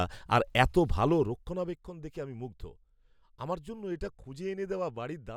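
From 1.09 to 1.84 s, between "আর এত" and "দেখে আমি মুগ্ধ", the speech drops by roughly 15 dB with zipper noise: the gain moves in discrete jumps, around fifty a second, instead of gliding, and each jump leaves a tiny click. Together they form a fine ticking buzz laid over the voice for as long as the level falls. A properly smoothed fade would change loudness just as audibly but without any added texture.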